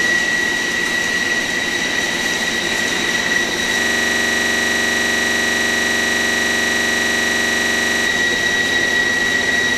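At 3.81 s the system hangs while the audio hardware keeps replaying its ring buffer, a system hang loop that lasts until 8.06 s. The same 42.67 ms slice, which fits a 2048-sample buffer, repeats about a hundred times at a rate of 23.4 Hz. With a loop that short, the sound freezes into a rough, steady buzz at that rate for over four seconds before normal playback resumes.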